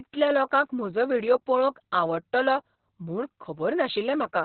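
Speech that has been through Opus voice compression from start to finish, with the encoder apparently starved of bits and falling back to its narrowband SILK linear-prediction mode. The heaviness of the damage fits a bitrate around 6 kbps and long 60 ms frames. Nothing remains above about 4.3 kHz, so the speech sounds muffled and telephone-like, and the coarse coding of the excitation adds a hoarse, slightly robotic edge.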